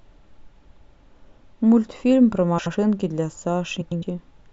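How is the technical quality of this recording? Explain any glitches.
The recording has three short glitches of one kind, frames out of order, at 0.60 to 0.81 s, 2.58 to 2.75 s and 3.81 to 4.03 s. Adjacent runs of frames were decoded in the wrong sequence, so two blocks of about 105, 78 and 105 ms play swapped. Each stretch becomes a garbled flutter, and no time is lost.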